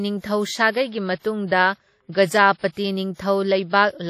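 Throughout the speech a ringing, washy smear hangs around each syllable, with a hiss that swells and fades alongside the sound and nothing above 15.3 kHz. This is likely heavy WMA compression, which fits an early WMA encoder at roughly 32 kbps, whose long transform blocks spread quantisation noise over time and zero out weaker detail.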